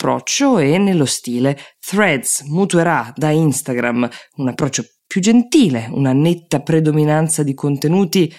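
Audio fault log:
No fault is heard anywhere in this speech clip.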